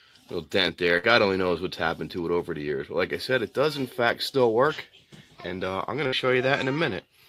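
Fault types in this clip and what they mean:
Burst of packet loss: packets missed playout at 0.97 s and 6.07 s; the receiver stretched and faded the last sound, then skipped 60 ms ahead.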